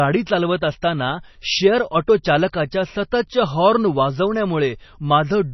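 From start to finish the speech has a hard ceiling near 5.9 kHz and a heavily damaged, watery texture, which points to MP3 compression, likely at a very low bitrate around 24 kbps. Starved of bits, the encoder drops the treble and lets weak frequency lines flicker on and off between frames, so sibilants turn chirpy and metallic and consonant attacks smear. A simple low-pass filter would dull the top without that swirling, frame-by-frame instability.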